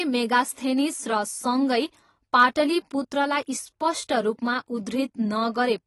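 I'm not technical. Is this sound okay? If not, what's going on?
No. The whole clip sounds dull and warbly, with nothing above about 15.1 kHz. This is likely AAC compression, squeezed hard enough to audibly damage the speech.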